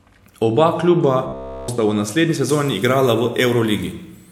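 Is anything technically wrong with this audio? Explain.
Yes, two things. From 1.28 to 1.68 s the speech turns into a rigid, metallic buzz at about 67 Hz, which is robotic sound from repeated short buffers. It's likely a starved stream looping roughly 15 ms chunks, so nearly everything you hear there is repeats, not fresh audio.

Then from 2.49 s to the end there's pre-emphasis left on. It matches a 75 µs FM treble boost that never got its de-emphasis, leaving 10 kHz about 13 dB hotter relative to 1 kHz. It sounds thin, bright and hissy on sibilants.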